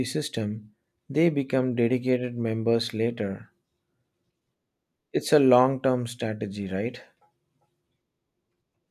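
No technical faults can be heard in this recording.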